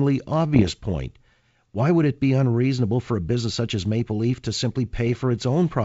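From 0.54 to 0.72 s, and again from 5.07 to 5.18 s just after "to simply", bit errors on an ADPCM link produce pops and rough bursts. Each flipped bit corrupts the decoder's step size and predictor, so the distortion rings on briefly with momentary level jumps.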